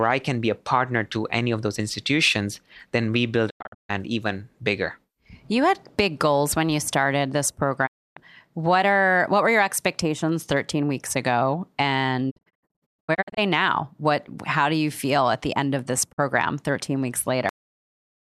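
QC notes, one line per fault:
3.49–3.91 s, 7.85–8.18 s, 12.29–13.39 s, 16.11–16.20 s: digital broadcast dropout. The receiver stopped getting usable frames and muted until clean data returned, so the speech fades out over 20 ms into silence and comes back further on, with the missing material gone. The first gap is several short holes adding up to 0.31 s (longest 144 ms). The second is one 0.29 s hole. The third scatters 0.6 s of silence across 1.06 s (longest 120 ms). The last is a brief 48 ms blink. All the losses fit whole 24 ms frames dropping out.
17.49 s: cut-off end. The final stretch of audio was never written out, so playback halts mid-sound at 17.49 s and falls straight to digital silence for the remaining 0.8 s. The speech has no natural decay or tail, just an abrupt stop, which is the signature of buffers lost at the end of capture rather than a fade or a closing pause.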